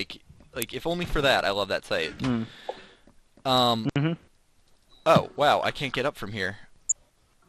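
Throughout, the audio sounds dull, with a gurgling, granular grain, most likely MP2 compression at a low rate, around 80 kbps. On a spectrogram the upper bands appear as flickering blocks that switch on and off, and the remaining energy looks coarse and stepped.

From 6.89 to 6.92 s comes a brief DAB burbling: short blips of noise as a low rate of bit errors slips through error correction and corrupts the audio data over a few frames. A spectrogram shows isolated sub-band blocks flaring briefly, and the waveform shows a brief ragged bump.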